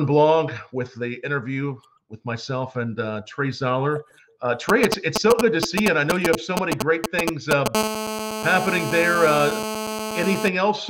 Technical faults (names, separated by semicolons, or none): GSM signalling bursts; GSM phone buzz